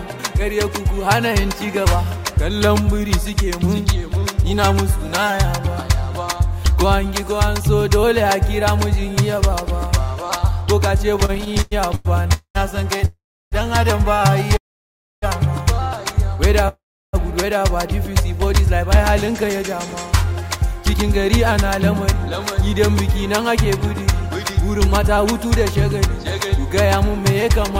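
From 11.15 to 14.55 s the audio shows repeated stalls (stutter): sixteen short gaps, the longest about 101 ms, together 371 ms, or 11% of that span. Packets reached the receiver late or too slowly, so its jitter buffer kept running dry, and each time it stretched the last sound until data returned. Nothing is lost, but the sound drags and hiccups. On a spectrogram the harmonic bands smear into brief frozen stripes; the waveform shows small repeated, decaying segments.

Within and after that stretch come four longer call audio freezes: 12.33 to 12.57 s (217 ms), 13.05 to 13.54 s (464 ms), 14.57 to 15.24 s (655 ms) and 16.68 to 17.15 s (451 ms). Each starts as a held buzz of the last sound that fades, then drops to silence for 80, 340, 630 and 350 ms respectively, before the audio resumes exactly where it stopped. The likely cause is packets held up in transit. On a spectrogram each appears as a flat, smeared band fading into a blank vertical strip. 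The waveform shows a dying tail followed by a near-flat line.

From 19.3 to 27.44 s a jitter buffer speed-up follows. The receiver held more audio than it wanted and trimmed the excess by cutting many tiny pitch-period pieces, about a fifth of a second in total. Playback runs at 103% speed with unchanged pitch. A spectrogram keeps the same frequency spacing while events crowd a little closer in time. In the waveform, cycles join without visible gaps.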